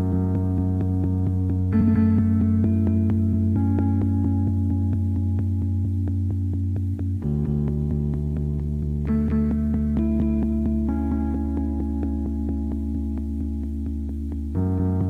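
At about 1.81 s there's a brief stretch, up to 1.96 s, where frames play out of order: two neighbouring blocks of roughly 70 ms each got swapped, which fits about three frames apiece. It comes across as a quick garbled flutter, and no time goes missing.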